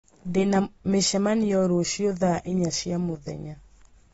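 From start to end the speech is dull and smeared, with nothing above 7.6 kHz on a spectrogram, a hard ceiling. This points to likely AAC compression at a low bitrate.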